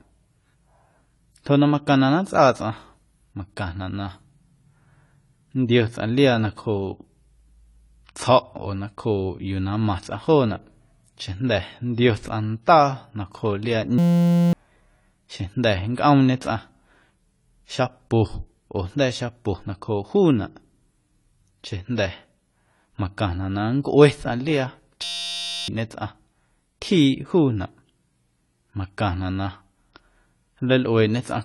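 Speech throughout, and the whole clip sounds dull and a bit smeared, with nothing above 11.5 kHz and a warbly, fizzy edge on sibilants. That's plainly audible codec damage, likely AAC compression at a low bitrate around 32 kbps, where the encoder drops the top band and starves the rest. Then there are two system hang loops, from 13.98 to 14.53 s and from 25.04 to 25.68 s. Each time the audio collapses into a steady buzz at 172 Hz, one 5.8 ms slice repeating over and over, which fits a 256-sample buffer cycling while the machine froze. You lose roughly half a second of speech at the first and about 0.7 s at the second.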